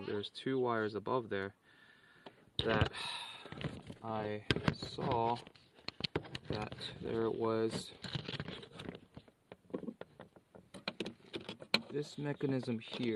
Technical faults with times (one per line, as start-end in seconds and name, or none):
none